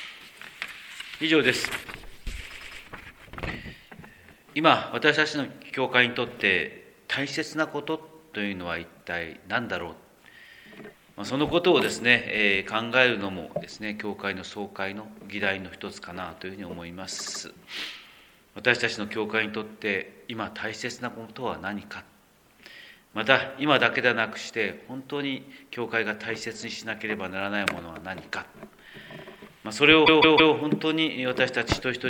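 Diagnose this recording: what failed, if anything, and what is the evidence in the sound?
A short stutter occurs three times: a brief block of sound plays four times in a row. At 2.50 to 2.81 s a 104.5 ms block repeats, at 17.18 to 17.41 s a 78.4 ms block, and at 30.06 to 30.53 s a 156.7 ms block. This is repeated frames at the codec or storage stage. Runs of compressed frames were written or delivered more than once, and the decoder dutifully played them again. The block lengths fit runs of a few codec frames, and each event lengthens the audio by three times its block.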